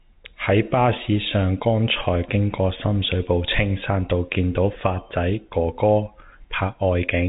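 Telephone-band speech, with no technical faults present.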